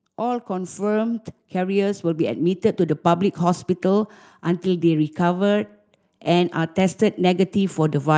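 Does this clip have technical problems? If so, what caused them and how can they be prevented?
Yes. Automatic gain rising runs from 0.16 s to 3.71 s: the level climbs by about 9 dB over those three and a half seconds. An automatic gain control judged the incoming speech too quiet and kept raising its gain step by step, so the voice and the background noise swell together rather than the voice alone getting louder. To prevent it, set a fixed input gain and disable the automatic gain control before recording.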